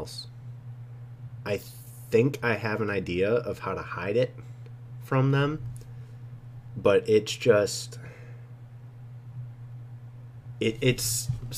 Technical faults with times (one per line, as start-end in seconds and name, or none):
none